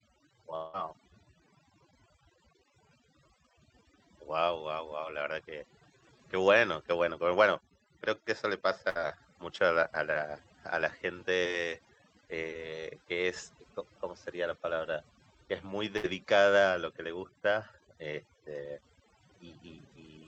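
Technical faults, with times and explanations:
Throughout: overdone noise removal; bands near the noise estimate are pulled right down, leaving a lowered background broken into twinkling specks.
0.55–0.76 s: about 180 ms of audio is replaced by a continued buzz or hiss that decays with no silent gap, likely a long network dropout concealed by the receiver.
8.89–8.98 s and 15.97–16.06 s: burst of packet loss; roughly 60 ms missing each time, bridged by a fading held buzz or hiss before the audio resumes further on.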